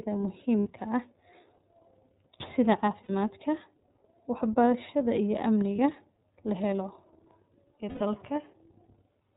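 Throughout, the speech is band-limited to nothing above 4 kHz and has a slightly rough, synthetic edge from the iLBC codec, clearly audible here. Its coarse excitation coding, which fits the 13.33 kbps mode with 30 ms frames, is what separates it from a plain low-pass filter, which would dull the sound without adding roughness.

Lost iLBC frames appear at 0.61 to 0.69 s, 3.03 to 3.10 s, 5.76 to 5.79 s just after "wax barashada iyo", and 7.89 to 8.02 s. At each gap the decoder repeats the last pitch cycle mixed with noise. This produces a held, buzzy vowel lasting about 60, 60, 30 and 120 ms, consistent with two, two, one and four lost frames. That held tone, rather than silence, marks these as concealed losses and not dropouts. The voice is clear again almost at once because each frame decodes independently.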